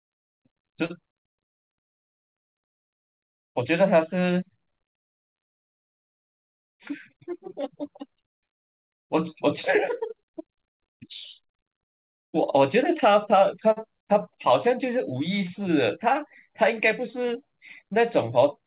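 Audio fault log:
0.86 to 0.92 s and 13.72 to 13.78 s, short stall from a late packet: twice a packet arrived late and the jitter buffer ran dry, so the receiver stretched the last sound by 36 ms and then 46 ms before resuming at the same point. Nothing is lost, but a sound is held unnaturally long with a slight buzz or dip. On a spectrogram, the harmonics run flat and smeared for that stretch. The waveform shows repeated, near-identical cycles.
6.40 to 7.55 s and 17.83 s to the end, jitter buffer speed-up: after a backlog built up, the receiver trimmed short pitch-period chunks many times in a row to cut the delay. It removed around 40 ms at 103% speed, and then around 70 ms at 106% through the final second. The sound runs faster at unchanged pitch, and the 106% stretch sounds hurried. The spectrogram shows syllables compressed in time with tiny seams, all within a band that stops at 4 kHz.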